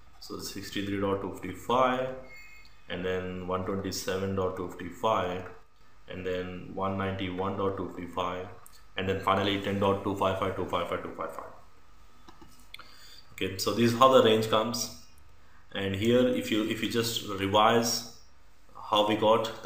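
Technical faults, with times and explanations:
5.62 to 5.81 s, one channel drops out: for about 0.19 s the level falls abruptly by about 6 dB and then returns, with no change in tone. The likely cause is one stereo channel going silent while both carried the same sound, so the mono sum loses half its amplitude. On the waveform the envelope steps down to roughly half height and steps back up. On a spectrogram the band dims evenly across all frequencies, with no change in spectral shape.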